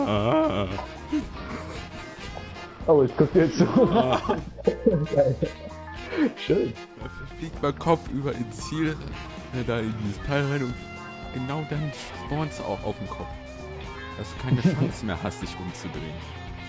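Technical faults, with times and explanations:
No technical faults can be heard anywhere in this audio.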